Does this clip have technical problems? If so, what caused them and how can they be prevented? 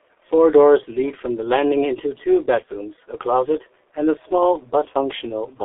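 Yes. The speech runs through the G.723.1 codec for its whole length, and the damage is heavy. The audio is confined to a telephone band of roughly 300 Hz to 3.4 kHz, so it sounds thin and muffled. At a bitrate near 6.3 kbit/s, with coarse 30 ms frames and a slowly updated voice model, the voice turns hoarse and the consonants smear together. To prevent this, record or transmit through a wideband codec at a higher bitrate instead of legacy narrowband telephony.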